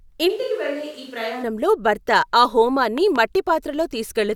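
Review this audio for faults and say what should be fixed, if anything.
Switch to a distant microphone, 0.31 to 1.42 s, ending just before "భర్త ఆ": the speech suddenly turns roomy and hollow, with thinner bass, about 10 dB quieter, and room noise only about 25 dB below the speech. The close microphone's signal likely dropped out, leaving only a far pickup. Monitor the close microphone's feed and secure its cable and transmitter so a backup source never has to carry the speech.

Loud pop, 2.98 to 3.18 s, right after "భర్త ఆ": two sharp pops sit on top of the speech, which continues underneath, peaking about 5 dB above it. The likely cause is a sudden voltage spike from a plug, switch, static discharge or driver glitch. Avoid touching connectors or switches while recording, and ground the equipment properly.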